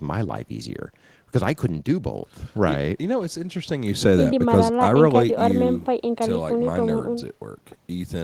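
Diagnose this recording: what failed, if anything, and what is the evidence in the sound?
Nothing failed in this recording, and the speech carries no evidence of a fault at any stage of the chain.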